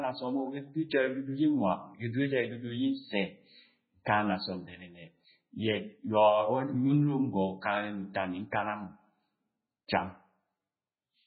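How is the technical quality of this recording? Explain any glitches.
Quality is poor throughout, with heavy compression damage across the whole speech recording. The sound has a watery, swirling texture and metallic chirps on s sounds. This is likely MP3 compression: starved of bits, the encoder dropped weak frequency detail that flickers between frames, which fits a bitrate around 16 kbps.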